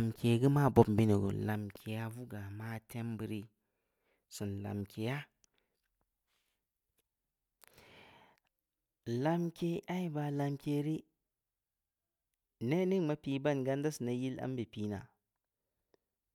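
No faults are present in the recording.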